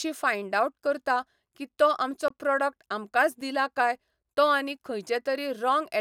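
A 21 ms hole at 2.28 s, then a tick at 3.41 s: blocks of digital silence, the first fitting a 1024-sample buffer left unfilled.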